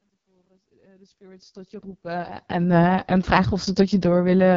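Speech carries AMR wideband (HD Voice) codec damage throughout: rough, raspy voicing and nothing above 7.2 kHz, which fits the lowest 6.6 kbit/s rate rather than narrowband coding's 3.4 kHz ceiling.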